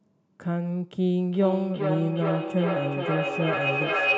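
A microphone-to-loudspeaker loop gains level on every pass, so from 1.3 s a feedback howl builds around 3 kHz. The loop repeats roughly every 400 ms, and the howl swells to about 1 dB below the speech, never fading before the clip ends.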